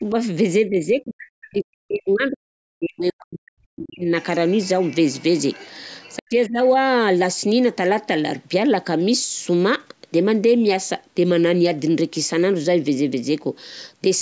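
Speech, and you can hear the talker getting squashed by speech suppressed in double talk: a small dip of about 10 dB at 0.0–0.14 s, then deep drops of around 40 dB from 0.65 to 2.54 s and 2.78 to 4.1 s, plus a shallower one of about 20 dB at 6.18–6.59 s. That's likely the echo canceller failing to tell the talker from loudspeaker echo and pulling both down. Then there's the other side's voice leaking through, faint and roughly 25 to 30 dB under the talker, as a scrap at 4.21–4.25 s and longer stretches at 4.47–5.23 s and 5.4–6.17 s, where the canceller has likely left some of the far-end playback in the mic.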